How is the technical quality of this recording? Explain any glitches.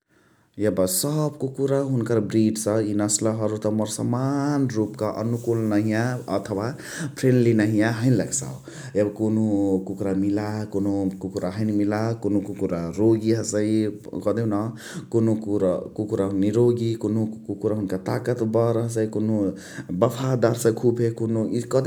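Nothing in the signal breaks down at any point: its level, continuity and timing hold steady across the whole recording, and there are no glitches to explain.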